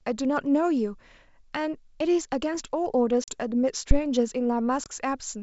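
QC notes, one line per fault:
3.24–3.31 s and 4.84–4.92 s, packet loss on an ADPCM call: about 40 ms, then 20 ms, of abrupt silence (roughly two packets, then one). Each resumes slightly distorted while the predictor resynchronises.
3.91–4.01 s, phantom power thump: a deep low-frequency thump from a supply step passing through the input's coupling capacitors, decaying in about 22 ms.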